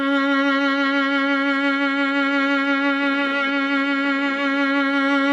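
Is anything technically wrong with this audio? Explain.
No, nothing technically wrong can be heard in this music clip. There are no faults to point to anywhere in it.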